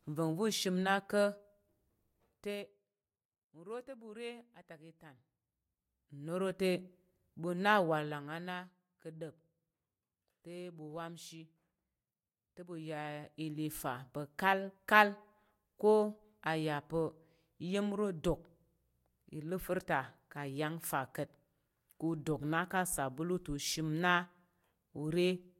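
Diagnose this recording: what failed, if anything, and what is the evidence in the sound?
Zipper noise from an unsmoothed gain stage. Ticking rides on the speech at 5.06–6.64 s, after "ɓu re atak i", and at 12.68–13.79 s, before "pa̱ kalkal". Level shifts of about 15 dB and 10 dB arrive in roughly twenty steps per second, each step clicking.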